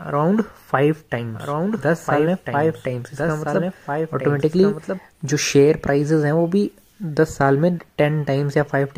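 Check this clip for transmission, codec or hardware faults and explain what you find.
There's one fault here, a doubled audio track, running from 1.35 s to 4.99 s. A second full-band copy of the sound sits about a second and a half behind the original, roughly 5 dB quieter. It's likely the same audio being captured again through a slower path, or an edit leaving two copies out of step. There's no decay or room colour on the copy, and it cuts in and out abruptly at both ends.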